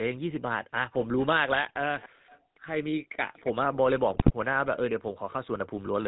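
Speech coded throughout with the GSM full-rate codec gives a buzzy, gravelly roughness and no content above 4 kHz, which fits the 13 kbps full-rate coder. Unlike simple low-pass band-limiting, the grain comes from the coarse, regularly pulsed excitation. From 1.67 to 2.01 s the speech drops very deeply, nearly to silence, for around 0.3 s. This is likely speech suppressed in double talk, the echo canceller ducking the talker while the far side spoke. A packet loss gap would be abrupt and fixed-length. From 4.10 to 4.34 s GSM bit errors, at a bit error rate of about 4.3 %, corrupt the decoder's filter, pitch and gain values. They produce squawks, pops and gargling bursts that sound distorted, which sets them apart from the clean dropouts of lost frames.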